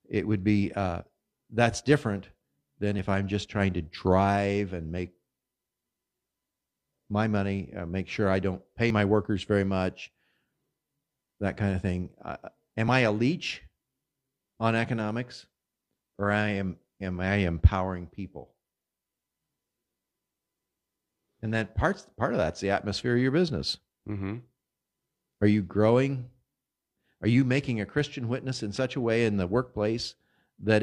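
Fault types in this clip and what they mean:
Overlap between stream segments: where two 2-second segments of this speech stream claim the same time span, the player trims the shared stretch, deleting real audio rather than a duplicate. Short slices drop out at 2.99–3.02 s, 8.90 s and 12.88–12.91 s, each heard as a small click or skip. A waveform shows an abrupt step where the cycles fail to join, and a spectrogram shows a thin vertical line spanning all frequencies at each point.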